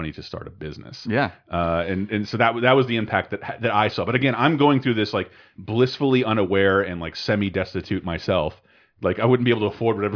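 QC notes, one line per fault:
No faults found in this clip.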